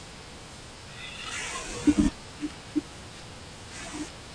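Speech plays at the wrong sample rate throughout, slowed to 0.689 times speed and 6.45 semitones lower, which fits 32 kHz audio played at 22 kHz. Pitch and tempo fall together, unlike a pitch shift.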